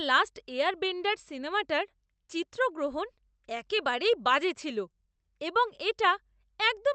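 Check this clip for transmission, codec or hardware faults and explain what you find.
No faults can be heard: the speech carries the ordinary coding noise of a call codec, and its highest frequencies stop near 8 kHz, which fits an Opus WebRTC call path working as designed.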